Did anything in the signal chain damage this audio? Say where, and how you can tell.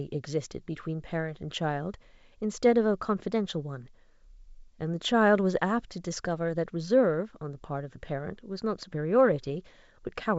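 No, nothing in the chain damaged this speech: it comes through G.722 wideband telephone coding at 64 kbit/s, which keeps the band up to about 7 kHz, and any trace the codec leaves on the signal is faint at most.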